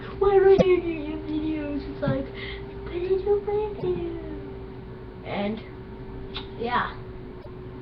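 Damaged data in a compressed stream corrupts frames at 0.56 to 0.62 s, 3.75 to 3.83 s and 7.38 to 7.47 s. Each time the decoder misreads the bad bytes and hunts for the next valid frame header, producing a brief squawk or blip lasting roughly 60 to 80 ms.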